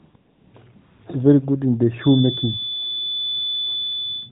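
From 0 to 0.14 s, 0.16 to 0.54 s and 0.76 to 1.02 s, AMR comfort noise replaces the real background. No speech frames were sent there. The receiver filled the gaps with smooth synthetic hiss that switches in and out.

From 1.96 s to the end, a feedback whistle sits at 3.5 kHz, roughly 10 dB below the speech. It is a thin tone at one pitch, swelling and fading slowly. The likely cause is a loudspeaker-to-microphone loop held at the edge of feedback.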